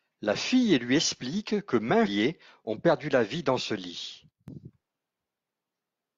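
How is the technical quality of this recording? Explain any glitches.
The recording has three glitches of two kinds.

Damaged data in the compressed stream occurs at 2.03 to 2.09 s, between "lui explique que maints" and "ont perdu la vie", and again at 5.31 s. Corrupted bytes made the decoder misread frames and hunt for the next valid header. Each spot sounds like a brief chirp or blip.

A sudden gain jump runs from 4.31 to 4.48 s, just after "vie dans ce lit". The speech and the background noise drop together by about 10 dB and then return. This was likely caused by a digital gain change applied from one sample to the next without a ramp.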